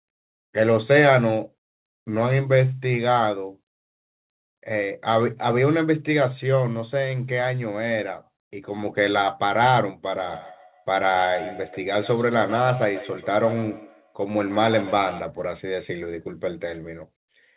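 From 10.05 to 15.3 s the speech is caught in a feedback echo between two devices. A second device in the room replays the call and its microphone sends it back. Each word then returns about every 150 ms, thinner and ringing, peaking near 13 dB below the speech.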